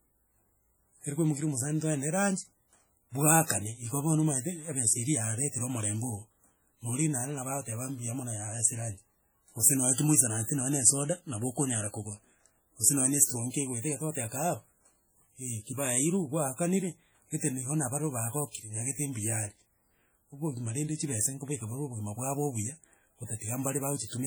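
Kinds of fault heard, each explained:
WMA compression: The speech carries heavy transform-codec damage for the whole clip, with ringing, washy tails and a hiss that rises and falls with the signal. This is likely WMA coding at a low rate, consistent with around 32 kbps, though content still reaches 20.1 kHz.
Pre-echo: From 18.51 to 18.55 s, just before "nyagete mbuyare", a brief hiss of about 38 ms leads the attack. The codec spread quantisation noise sized for the loud onset across its whole block, filling the quiet moment ahead and softening the attack.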